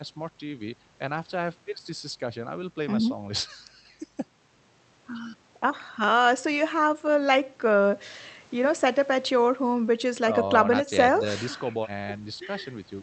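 Nothing goes wrong anywhere in this speech clip, just the ordinary sound of audio that has travelled over a call connection.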